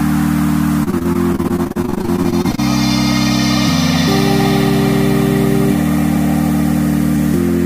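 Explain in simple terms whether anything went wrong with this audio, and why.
Between 0.83 and 2.6 s there's repeated packet loss (robotic sound): 28 tiny dropouts, none longer than 34 ms, each patched by stretching out the last bit of sound. About a third of that stretch is filler, so it turns choppy and robotic.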